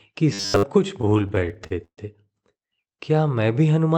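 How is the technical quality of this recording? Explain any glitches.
The speech has two audible faults, both in the first two seconds, over an Opus-style call path whose top end stops near 8 kHz.

From 0.33 to 0.64 s, robotic sound from repeated short buffers: a rigid 100 Hz metallic buzz, likely from one 10 ms buffer looped while new audio was late.

From 1.01 to 1.99 s, repeated stalls (stutter): the jitter buffer kept running dry and the last sound was stretched, about a third of that span, with gaps up to 0.13 s and no audio lost.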